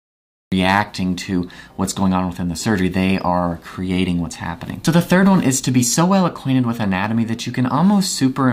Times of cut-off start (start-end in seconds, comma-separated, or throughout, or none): 0.00-0.52